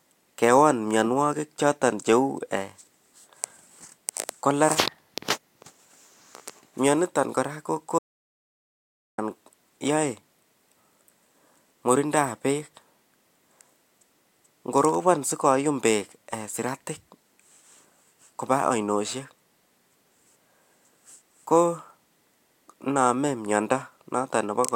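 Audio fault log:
7.99–9.18 s, audio dropout to silence: Right after "myoniton kora ko", the speech stops mid-flow and the signal falls to silence. No room tone or hiss remains in the gap. After about 1.19 s the speech returns abruptly, already under way. Whatever was said in between is gone. The likely cause is a brief loss of the input, such as a dropped connection or a momentary mute, while recording continued and wrote silence.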